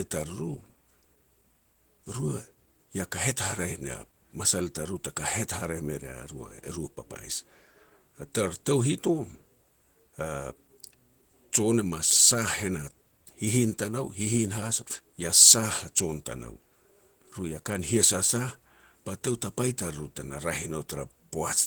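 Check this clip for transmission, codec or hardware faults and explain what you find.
One fault runs through the whole speech clip: Opus voice compression, with plainly audible codec damage. The band stays full, reaching about 20.1 kHz, but the speech sounds hoarse and slightly robotic. This fits hybrid Opus near 16 kbps: linear prediction below 8 kHz, CELT above, with coarse excitation coding. A spectrogram would show coarse, blocky upper-band energy in 20 ms frames.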